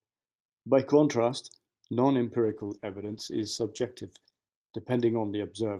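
Call bitrate drop from 2.45 s onward: the encoder, starved of bits, codes coarsely and cuts the highs, leaving speech rough and muffled, suggesting roughly 13 kbps.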